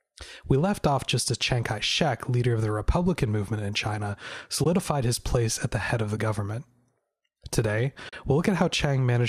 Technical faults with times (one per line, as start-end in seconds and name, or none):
4.63-4.66 AAC frame loss with muting
6.17 AAC frame loss with muting
8.09-8.13 AAC frame loss with muting